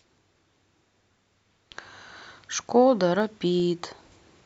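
A speech clip with CD scratch ticks near its end. Four short ticks fall between 3.2 and 3.8 s. They come at a steady pace of about five per second. Each is very brief, the longest under about 2 ms. The pattern points to a scratch or blemish on the disc. Once per turn, it wiped out more data than error correction could rebuild. The player then patched or muted those few samples, leaving a regular click each revolution.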